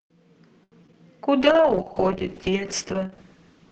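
From 0.63 to 0.95 s the audio breaks up into repeated packet loss with a robotic sound. Four separate gaps fall inside about a third of a second, the longest about 84 ms. Each one is bridged by stretching the last fragment forward, so roughly 36% of that span is synthetic fill and about 80 ms is simply gone. The robotic repetition with chunks dropping out marks this as loss. A codec problem would roughen the sound without creating holes.

Between 1.23 and 1.85 s comes a jitter buffer slow-down. The receiver repeated short pitch cycles and pause fragments to rebuild its reserve, adding about 55 ms and running that passage at 92% speed. Sounds drag out slightly, but the pitch stays put. Nothing goes missing and there is no choppy metallic edge, and that separates it from the loss just before.

From 1.41 s to the end, a call bitrate drop sets in. It overlaps the tail of the slow-down. The sound points to the encoder falling from around 40 kbps to about 6 kbps and staying at its lowest for roughly 1.3 s. 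Opus then codes coarsely and trims the top end, and the audio turns watery, rough and muffled compared with the fuller 8 kHz band heard earlier in the clip. This fault is a loss of quality without gaps or timing change, so it sounds neither choppy nor slowed.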